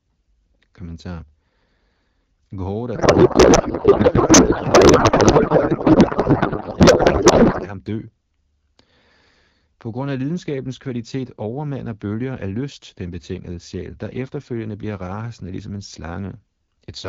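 A codec payload misread runs from 2.96 to 7.72 s: the AMR frames arrive octet-aligned but are decoded as bandwidth-efficient, so every field lands in the wrong place. The speech gives way to garbled noise and warble that barely tracks it, then clears once the two sides agree again.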